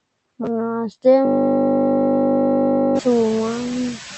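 Noise suppressor artifacts run through the whole clip. Steady background noise is pulled down by about 5 dB, and the noise sinks between the words and rises under them. From 1.25 s to 2.99 s, a system hang loop takes over. The system froze while the hardware replayed one 20 ms buffer, producing a steady 50 Hz buzz. After the loop ends, the room noise rises around 3 s.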